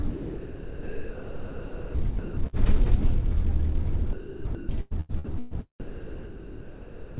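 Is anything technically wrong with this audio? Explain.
Yes. From 0.03 to 2.55 s and again from 4.13 to 5.53 s the sound is chopped: it cuts in and out against a flat hiss. This is likely the sender's voice detector, with its sound chopped as it toggled transmission and comfort noise filled about 2.1 s and 0.8 s of those stretches. On a waveform, real bursts alternate with low, even noise blocks. A spectrogram shows smooth, featureless bands between the textured segments.

From 5.80 to 7.18 s the sound is likely dropped by the voice detector. Transmission stopped, and about 1.3 s of real sound is lost under steady comfort noise that runs to the end. The waveform flattens into uniform low-level noise, and the spectrogram shows a flat, structureless band, all of it below 4 kHz like the rest of the call audio.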